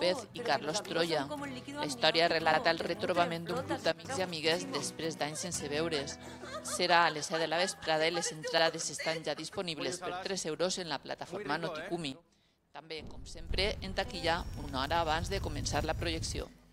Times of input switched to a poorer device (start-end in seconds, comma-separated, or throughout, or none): none